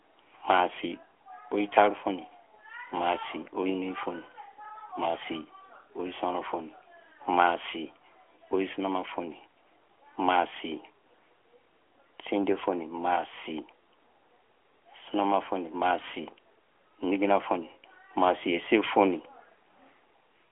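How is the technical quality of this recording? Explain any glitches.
No glitches can be heard anywhere in this speech recording. It carries the narrow bandwidth of an AMR narrowband mobile codec link, with nothing above about 3.7 kHz and the light, slightly synthetic coloration of that codec's 12.2 kbps top rate.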